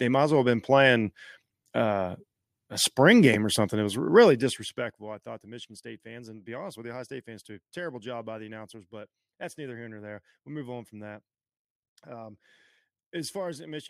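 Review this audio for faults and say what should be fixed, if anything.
Zipper noise runs from 4.11 to 5.21 s as the speech level drops by roughly 20 dB. The gain moves in unsmoothed steps, around a hundred a second, and each jump leaves a tiny click, so a fine ticking rides on the voice during the fade. To prevent it, ramp the gain sample by sample, or interpolate across each buffer.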